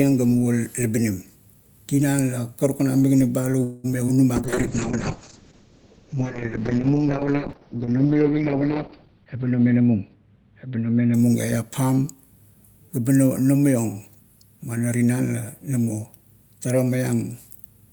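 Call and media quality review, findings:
Call audio freeze, 3.63–3.86 s: last sound stretched into a fading buzz for about 0.2 s, then speech resumes where it stopped. Likely a packet delay spike draining the jitter buffer. Distinct from loss: nothing skipped, only a gap inserted.

Short concealed packet loss, 3.92–3.95 s and 4.07–4.10 s: brief smear or wobble in speech. About 20 ms each never reached the decoder and was patched by extrapolation. Unlike the freeze, too short for a buzz.

Call bitrate drop, 4.37–11.24 s: speech turns rough and muffled. Encoder rate cut from 48 to 6 kbps, bottoming for about 4.7 s, audio bandwidth narrowed from 20 kHz to 6 kHz. Dullness points to bitrate, not a bad mic.

Jitter buffer speed-up, 9.02–10.23 s: speech hurried, running at 115% with pitch unchanged. Buffer over target, so roughly 0.2 s trimmed in pitch-period slices. Unchanged pitch separates this from a clock or resampling error.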